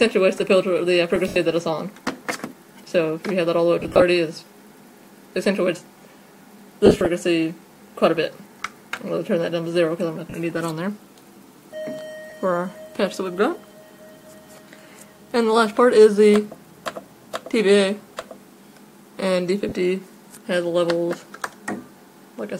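At 1.16 s, new audio failed to arrive in time and the device played its last buffer once more, a repeated buffer about 1.5 ms long, which fits a 64-sample buffer. The hard join at the repeat comes through as a brief click.

Lost LE Audio frames follow at 1.28–1.36 s (80 ms), 3.80–4.02 s and 6.86–7.06 s (150 ms and 110 ms of losses scattered in bursts), 10.30–10.34 s, 12.30–12.32 s and 19.69–19.72 s. Each time, the LC3 decoder reused the last spectrum with scrambled signs, so the sound smears into noise, and the 80 ms gap fades toward silence.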